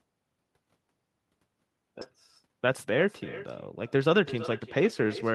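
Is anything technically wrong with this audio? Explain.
Yes. Throughout, there is echo with no canceller: the far end's loudspeaker feeds its microphone and nothing strips that out, so the speech returns after roughly 400 ms at about 16 dB below the original, a quieter, thinner shadow trailing each phrase.

At 2.01 s there is a skip ahead: around 400 ms of audio was discarded while later audio was already queued, and playback jumps straight past it with no gap filled. The speech lurches forward, missing material, and cuts that delay by the same amount.

Two stretches of jitter buffer speed-up follow, from 2.47 to 3.05 s at 108% speed and from 3.86 to 4.40 s at 106%. Holding excess audio, the receiver repeatedly trimmed pitch-period-sized slices, about 50 ms and 40 ms in total, so the speech runs hurried while its pitch stays unchanged.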